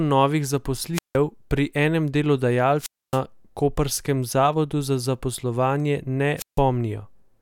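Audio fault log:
0.93–1.17 s, 2.77–3.20 s and 6.36–6.60 s, wireless microphone squelch dropout: a short swell of hiss, then near-silent holes of about 165 ms, 269 ms and 155 ms before the speech returns, as the radio signal fades and the receiver's squelch mutes the output.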